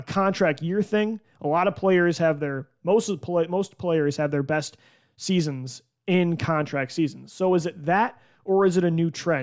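Listening to this speech recording, nothing stood out as a technical problem at any point.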